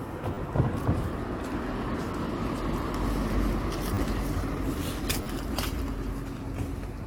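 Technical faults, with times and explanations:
0.34–0.37 s, 3.94–3.97 s and 5.23–5.26 s, repeated buffer: fresh audio missed its deadline, so the device replayed its last short block, which fits a 10 ms buffer, three extra times. Each repeat joins abruptly, giving a brief buzzy stutter and dropping about 30 ms of sound.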